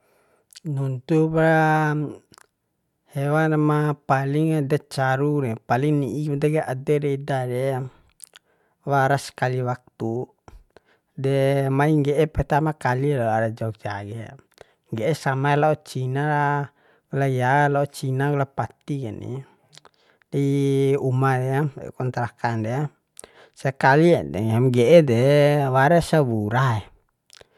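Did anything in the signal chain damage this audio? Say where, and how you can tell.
No, nothing along the chain audibly damaged this speech recording, and the signal shows no break, distortion or disturbance that would point to trouble at any stage.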